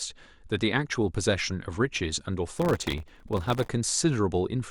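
A speech recording with processor overload crackle from 2.56 to 3.68 s: a dense run of missed audio deadlines, each leaving a sub-millisecond silent gap, which fits very short buffers. The waveform shows many tiny hard-edged near-silent dropouts, and the spectrogram shows closely packed vertical broadband streaks.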